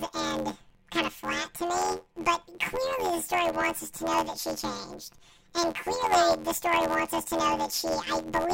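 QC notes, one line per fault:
Throughout: planar audio read as interleaved. The speech carries a robotic buzz at about 86 Hz, and the pitch does not move a clear octave. Each block of roughly 11.6 ms, which fits a 512-sample buffer, holds all of one channel and then the other, but it is read as alternating pairs. Every block plays twice at double speed, left and then right, so the pacing survives. On a spectrogram, harmonic smearing repeats about every 11.6 ms. The waveform shows a matching seam pattern.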